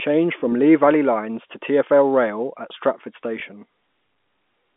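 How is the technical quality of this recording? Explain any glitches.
Two brief glitches occur, at 0.40 to 0.42 s and 3.40 to 3.42 s, on a telephone-band line passing roughly 200 Hz to 3.5 kHz.

Packet loss with last packet repeated: a 20 ms gap, which fits one lost packet, was filled by replaying the previous block. Each single repeat sounds like a small blip.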